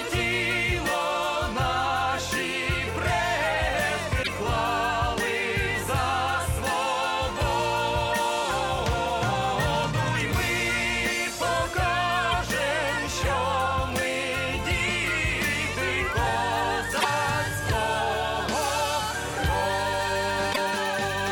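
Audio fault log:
4.19–4.28 s, 12.31–12.34 s, 16.97–17.05 s and 20.49–20.58 s: damaged data in a compressed stream. Each event is a short chirp, squawk, click or hole lasting about 84 ms, except the 24 ms event at 12.31 s. Corrupted bytes make the decoder misread the frames there and lose sync until it finds a valid frame header. On a spectrogram each event appears as a narrow vertical smear of garbled energy. On the waveform it shows as a brief block with abrupt edges that breaks the surrounding pattern.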